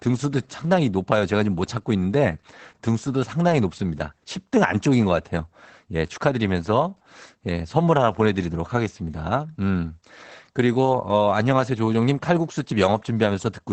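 The clip is speech, and Opus voice compression affects it from start to finish. Nothing reaches above about 8.6 kHz, so the top of the sound is cut off and it comes across muffled. The coder is working in its SILK linear-prediction mode at wideband. Its excitation is coded coarsely, which leaves the speech hoarse and faintly robotic. The damage is plainly audible. Its degree fits a low bitrate, around 12 kbps.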